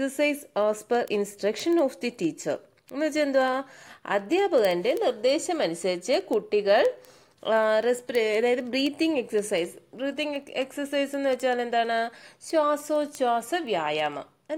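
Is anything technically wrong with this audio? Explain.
Yes. From 0.10 s to the end, a train of sharp ticks runs through the audio at a steady rate of roughly one every 70 ms, some noticeably louder than others. These are word clock ticks: the receiving device runs on its own clock, not locked to the sender's, and drifts by a few hundred parts per million. Each time the clocks slip, a sample is dropped or repeated, producing one tick, around two hundred in total.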